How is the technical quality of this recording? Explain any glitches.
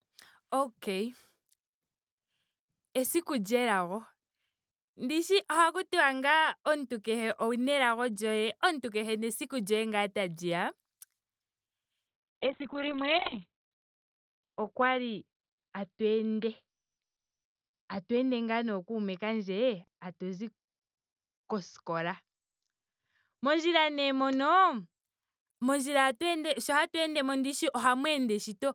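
A call bitrate drop runs from 12.08 to 25.05 s. The encoder was forced onto far fewer bits, coding coarsely and cutting the top end from about 20 kHz to 4 kHz. The speech turns muffled and watery, worst for about 1.3 s, which fits a fall from roughly 40 to 6 kbps.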